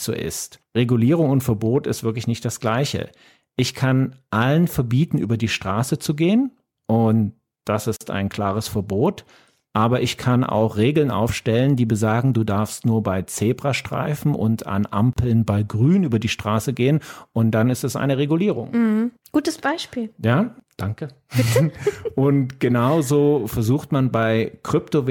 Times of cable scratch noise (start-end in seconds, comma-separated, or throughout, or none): none